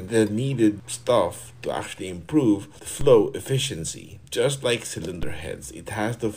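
A DC step occurs twice, at 3.01 s and 5.23 s: the waveform's zero line jumps by about -19 dBFS, heard as a low thump, then drifts back as a roughly 2 Hz high-pass bleeds it off. Unlike a dropout or plain click, the audio continues uninterrupted.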